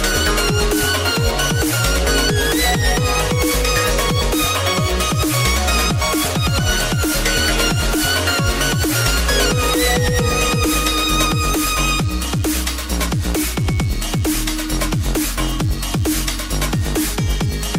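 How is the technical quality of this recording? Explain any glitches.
The recording carries one fault from start to finish: DECT cordless phone buzz. A nearby DECT handset or base transmits a brief radio pulse every 10 ms, which the audio circuitry rectifies into a thin, steady 100 Hz buzz, roughly 25 dB below the sound. A spectrogram shows evenly spaced horizontal harmonic lines; the waveform shows regular 10 ms spikes.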